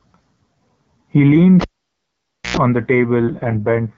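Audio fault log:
1.61 to 2.57 s, cable pulled and plugged in: a pop, about 0.9 s of near silence, a 0.1 s burst of 60 Hz mains buzz as the tip touches, then another pop.
3.20 to 3.97 s, AMR rate drop: the HD Voice link falls from 12.65 to 6.6 kbit/s, so the speech turns rough and raspy, same bandwidth, no gap.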